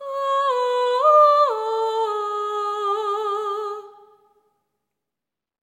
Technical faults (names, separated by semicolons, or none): none